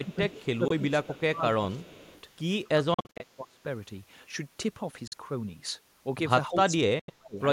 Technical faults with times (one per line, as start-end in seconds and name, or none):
0.00-0.19 speech suppressed in double talk
0.13-0.45 echo leak
0.51-2.11 speech suppressed in double talk
0.68-0.72 Bluetooth dropout
1.80-2.21 echo leak
2.64-3.60 speech suppressed in double talk
2.94-3.22 Bluetooth dropout
5.07-5.14 Bluetooth dropout
6.48-7.40 speech suppressed in double talk
6.99-7.10 Bluetooth dropout